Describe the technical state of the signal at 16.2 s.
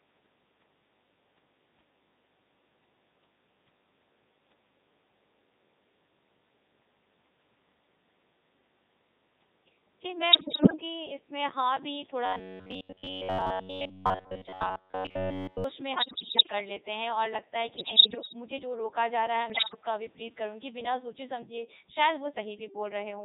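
At 16.2 s the speech is inside a burst of bit errors on digital voice radio, running from 15.94 to 16.52 s. Around one bit in ten arrives flipped, and each wrong bit misdirects the pitch, level, voicing or spectral envelope of an entire frame. The voice jumps in pitch and loudness, changes tone colour, and breaks into bleeps, warbles and robotic gibberish.

Underneath, the whole recording passes through the Codec 2 vocoder, with heavy damage that fits its 3.2 kbit/s mode. The decoder rebuilds the voice from sine waves driven only by pitch, voicing, energy and envelope parameters, discarding the original waveform, so the speech sounds buzzy and robotic at this point too.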